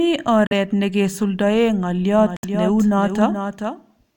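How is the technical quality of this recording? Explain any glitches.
The recording has two kinds of fault: brief silent gaps twice, and a second copy of the speech running behind the first for the last part of the clip.

Bluetooth dropout, at 0.47 to 0.52 s and again at 2.37 to 2.45 s: packets likely arrived too late at the headphones and were discarded. The sound cuts to silence for about 43 ms, then about 64 ms, fitting two and three lost packets, and resumes as if it had kept playing.

Doubled audio track, from 2.19 s to the end: the speech was likely captured a second time through a slower path. A full-band copy about 5 dB quieter trails the original by roughly 0.4 s. It appears abruptly and has no decay or room colour.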